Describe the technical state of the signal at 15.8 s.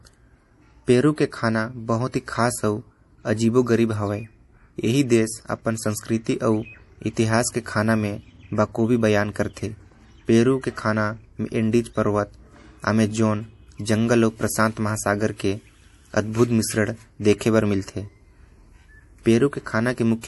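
At 15.8 s, as throughout, bit-starved MP3 compression, likely near 48 kbps, cuts everything above 11.5 kHz and flickers weak components, leaving the speech plainly watery and swirly.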